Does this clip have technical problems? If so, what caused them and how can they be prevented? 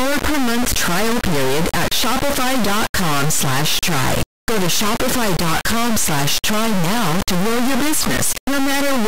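Yes. Throughout the speech an integer read as float fault replaces the audio with a harsh, extremely loud buzzing square wave that drops to silence in quiet gaps. The 32-bit integer samples were decoded as 32-bit float, so their bit patterns became near-zero or enormous values pinned at the clipping limit. Ordinary overload clipping tracks loudness and keeps the speech's tone; this does neither. Declaring and checking the sample format wherever audio is read prevents it.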